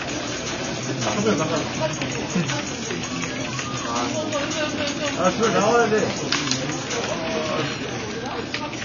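From start to finish the sound is dull and smeared, with nothing above 7 kHz and a warbling, fizzy texture on sustained and hissy parts that is plainly audible. This is likely AAC compression (AAC-LC) at a low bitrate, consistent with roughly 24 kbps. Short of bits, the encoder lowers its cut-off and quantises coarsely against its hearing model, emptying parts of the spectrum or filling them with substitute noise.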